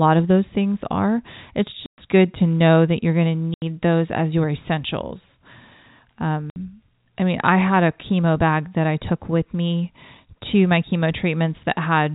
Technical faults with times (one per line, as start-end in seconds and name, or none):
1.86-1.98 packet loss filled with silence
3.54-3.62 packet loss filled with silence
6.50-6.56 packet loss filled with silence